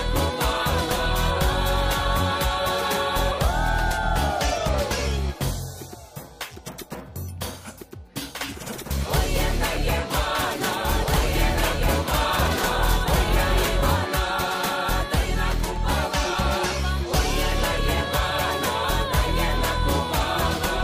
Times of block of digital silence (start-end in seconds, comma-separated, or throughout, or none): none